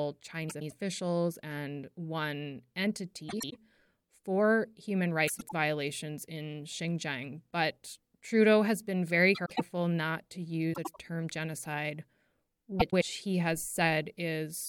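Frames out of order occur at 0.49–0.72 s, 3.29–3.56 s, 5.27–5.53 s (after "for human"), 9.35–9.61 s, 10.73–10.98 s (after "not to"), and 12.79–13.03 s (just before "he has"). In each, two adjacent runs making up roughly a quarter-second of speech were decoded swapped, so the halves play reversed. The length of each swapped block fits runs of four frames. Each stretch sounds like a garbled flutter, and no time is lost.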